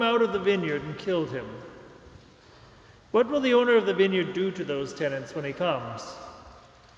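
No technical faults are audible.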